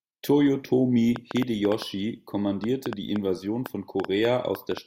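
A train of clicks runs from 1.16 s to 4.78 s: around twenty near-identical pulses, 4.7 per second at an uneven pace, ticking through the speech and its pauses and peaking about 10 dB above it, likely from electrical interference or a faulty connection or power supply.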